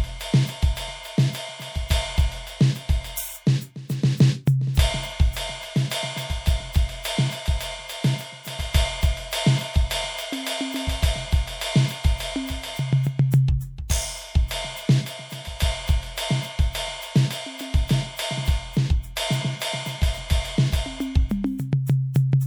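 At 13.88 s the music has a brief pre-echo. A sharp attack lands late in a transform codec's block. The codec spreads its quantisation noise across the whole block, so noise scaled for the loud hit also fills the quiet instant before it. Here that noise runs about 16 ms ahead of the attack. You hear a short hiss just before the hit, and the attack loses its crispness and sounds smeared.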